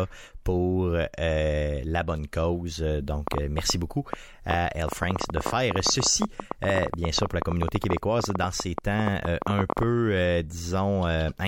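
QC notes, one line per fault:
3.28–9.84 s, train of clicks: some seventy similar pops at about 11.3 per second, unevenly spaced and peaking around 15 dB above the speech, tick through words and pauses alike, likely from electrical interference. Waveform shows sharp spikes; spectrogram shows thin vertical broadband lines.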